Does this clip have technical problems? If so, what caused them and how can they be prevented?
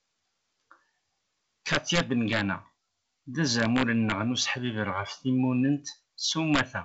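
Yes. Integer overflow at 1.73–2.41 s, 3.60–4.12 s and 6.54–6.61 s: peaks driven about 8, 4 and 8 dB past full scale wrap to the opposite sign, producing violent cracks. Saturating arithmetic or a limiter before the integer stage would prevent this.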